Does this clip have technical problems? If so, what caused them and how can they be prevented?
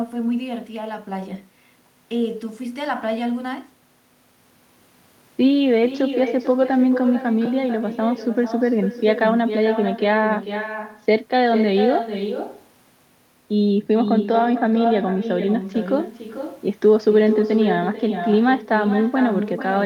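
Yes. Echo with no canceller runs through the whole speech clip. A quieter, thinner copy, about 8 dB down, trails each phrase by roughly 0.4 s. The far end's loudspeaker feeds its microphone unchecked. Enabling echo cancellation or using headphones there prevents it.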